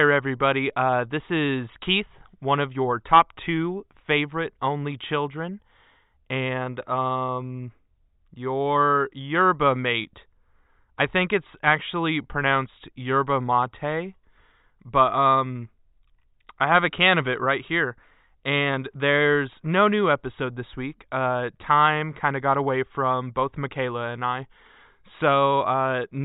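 No technical faults can be heard anywhere in the speech.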